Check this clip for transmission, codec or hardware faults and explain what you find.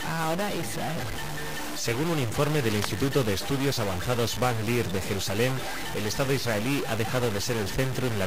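One hardware fault runs through the whole clip: a stuck bit. From start to finish the sound carries a harsh, buzzy distortion. Quiet passages are not clean either. They fill with a constant noise floor. The likely cause is one data bit held at a fixed value by a broken line or converter. About half the samples then land off by that bit's weight, a step of about -30 dBFS. The error flips with the waveform's sign near zero, producing the buzz and the noisy pauses.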